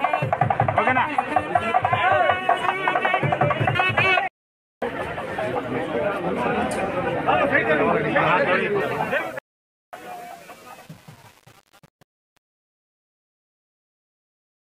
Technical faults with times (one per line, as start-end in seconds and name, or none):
8.80-14.73 truncation distortion on a fade